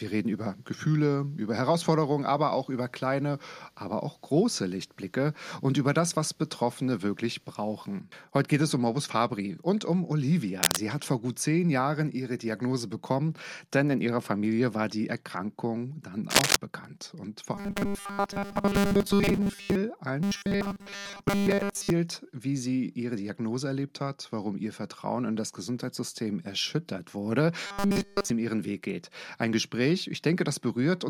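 At 10.56 s there's a quick burst of cable scratch noise, about 0.2 s of rough, uneven rustling roughly as loud as the sound itself. It comes back at 16.30 s for about a quarter second, this time a bit louder than the sound. That crackly texture is most likely a worn cable or connector being moved, with its contact resistance jumping around and spraying noise into the signal.

Then from 17.55 to 19.75 s, again from 20.23 to 21.90 s, and once more from 27.67 to 28.30 s, you get the robotic sound from repeated short buffers: a stiff, metallic buzz pinned at 200 Hz that only loosely follows the underlying sound. The likely cause is audio arriving too slowly, so the last tiny chunk gets looped. A 200 Hz buzz points to roughly 5 ms repeats. In the first two stretches most of the audio is replaced, and in the last one all of it is.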